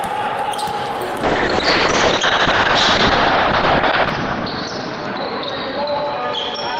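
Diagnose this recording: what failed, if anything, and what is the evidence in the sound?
Call bitrate drop in the codec: from 1.24 s to the end the sound turns coarse and muffled, capped near 6 kHz, which fits roughly 6 kbps.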